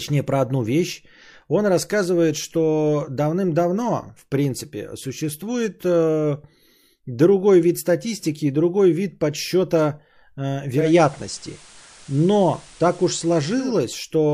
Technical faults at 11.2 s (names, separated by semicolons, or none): digital radio blending to analogue